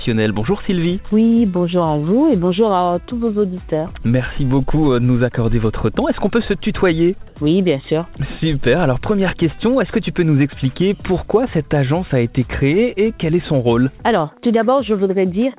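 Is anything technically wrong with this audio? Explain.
Yes. From 7.28 to 7.36 s, comfort noise in place of the background: the real background, about 29 dB below the loudest passages, becomes flat, featureless hiss for 80 ms, likely because transmission paused and the receiver synthesised filler. Unlike a dropout, the noise continues, shifting only about 1 dB.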